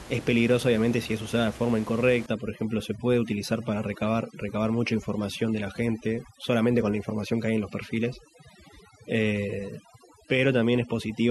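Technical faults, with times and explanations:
2.26–11.31 s, overdone noise removal: the background drops and breaks up into twinkling specks, because an over-strong noise reducer mutes bands near its noise estimate.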